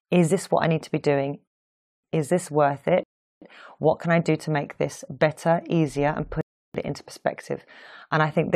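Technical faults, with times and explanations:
1.48–2.04 s, 3.03–3.42 s, 6.41–6.74 s, rebuffering stalls: the speech halts after "need to be doing", "this worth" and "better easier and put", for 0.56, 0.38 and 0.33 s, because the player ran out of buffered audio. Each time it resumes exactly where it stopped, with nothing lost, which is why "it into" follows directly after the third gap. The waveform shows flat silent gaps, and the spectrogram shows blank vertical bands with sharp edges.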